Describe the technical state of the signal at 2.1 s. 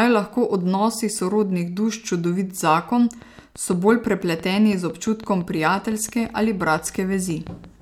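At 2.1 s the signal is intact, with no dropout, distortion, glitch or other technical fault at that moment.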